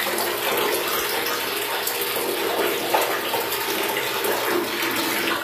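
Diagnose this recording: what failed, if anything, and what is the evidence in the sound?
The codec stage is at fault: across the whole clip the treble has a gritty, metallic sheen that doesn't belong to the source, which points to HE-AAC compression, likely at a low rate around 24 kbps. Above the crossover the top band is rebuilt by copying lower bands upward under a coarse envelope, so its harmonics fail to line up with those below. On a spectrogram the treble shows smeared, repeated blocks, with nothing above 15.4 kHz.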